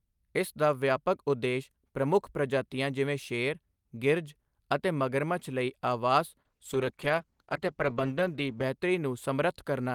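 At 6.47 s, just after "ਅਤੇ ਮਗਰਮੱਛ ਲਈ ਆਵਾਸ", a call bitrate drop sets in. The call's bandwidth estimate fell, so the encoder had far fewer bits to spend. It codes the speech more coarsely, which fits a fall from about 48 kbps to about 13 kbps. The speech turns rough and loses detail. The worst stretch lasts about 2.2 s. Quality recovers by 8.73 s.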